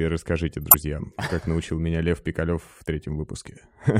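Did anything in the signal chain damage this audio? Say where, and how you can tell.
Yes, at the codec stage: a corrupt frame was decoded from 0.62 to 0.74 s, just before "как научил меня", heard as a chirp, squeak, blip or burst of noise. Damaged bits misplaced energy across several frames, showing as a spurious spectrogram block and waveform spike.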